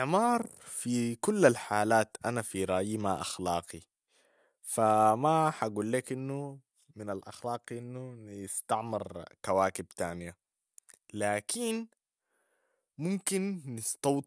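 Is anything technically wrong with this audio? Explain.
No, nothing here sounds technically wrong; it's just speech coming through without any trouble worth pointing out.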